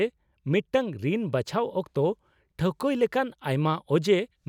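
Nothing technical goes wrong anywhere in the speech here, so there's no fault to point to at any moment.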